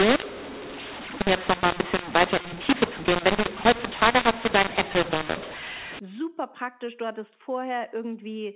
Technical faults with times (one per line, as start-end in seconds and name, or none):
0.00-5.99 mu-law and A-law mixed up